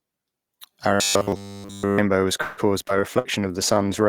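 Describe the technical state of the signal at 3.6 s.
At 3.6 s the speech is under a call bitrate drop that runs from 2.88 s to the end of the clip. The encoder fell from 32 kbps to 14 kbps and codes far more coarsely, so the sound turns rough and watery. On a spectrogram the upper band looks sparse and blotchy rather than finely detailed.

A jitter buffer slow-down also covers this moment, from 3.41 s to 3.85 s. The receiver repeated single pitch periods to rebuild its reserve, adding 51 ms and playing at 90% speed with unchanged pitch. The waveform shows runs of near-identical cycles, and the spectrogram shows harmonics stretched sideways at the same spacing.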